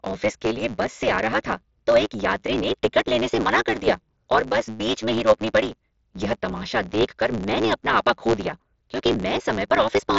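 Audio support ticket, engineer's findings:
Block size mismatch (truncated), throughout. Upstream stage writing longer blocks than the next stage reads, fits 512-sample writes; tail of each block discarded. Result: buzz at about 109 Hz, the block rate, and speech running 1.16x fast at near-normal pitch. mSBC Bluetooth headset path audible underneath: band stops near 7.7 kHz, light grain on loud syllables.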